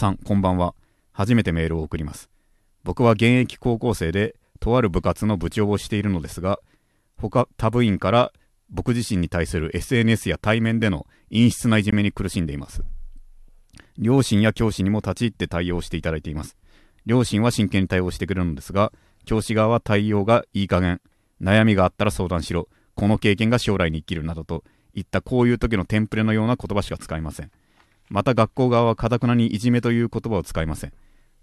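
This speech clip was encoded in separate pieces that were joined without trimming the encoder's start delay and end padding, leaving a gap at a join of encoded pieces. At 11.91 s a silence of about 18 ms cuts into the speech, with smeared edges, before it resumes.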